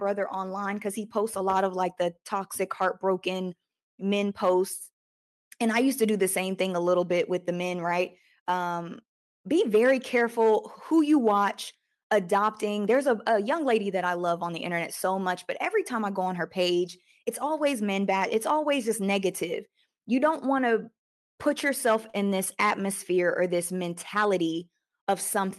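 Speech, with one short stall from a late packet between 22.10 and 22.17 s, right after "want to put yourself" and before "in this atmosphere or". A packet arrived late and the jitter buffer ran dry. The receiver stretched the last sound by about 40 ms to cover the gap, then resumed where it left off. No speech is lost. The held sound has a slight buzz or dip, and everything after it runs 40 ms later. The audio passed through a call codec whose top end stops near 12 kHz, which fits Opus.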